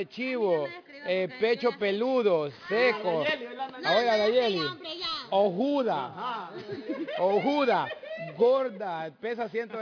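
Aliasing runs through the whole audio. The sample rate was dropped with no filter first, and the result fits an 11 kHz rate. Content above 5.5 kHz folds back as false, unrelated tones, roughly 25 dB below the signal. High sounds turn gritty and metallic.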